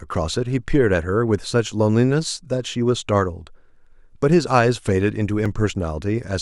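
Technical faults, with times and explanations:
0.63 to 5.46 s, clock drift buffer slips: about four short clicks recur every 1.61 s during the speech. Likely two devices run at slightly different rates, several hundred parts per million apart. The buffer drifts until about 70 samples are dropped or repeated.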